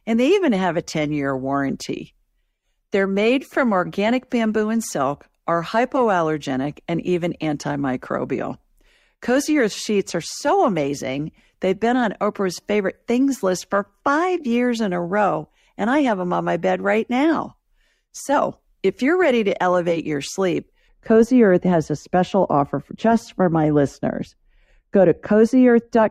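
Right after "to elevate your sleep" at 20.89 s, wrongly applied de-emphasis kicks in: a treble cut, about 11 dB down at 10 kHz, so the speech turns dull and muffled through the end.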